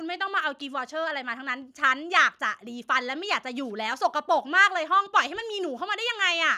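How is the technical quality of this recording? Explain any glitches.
No technical faults can be heard anywhere in the speech recording, and the signal stays intact and stable throughout.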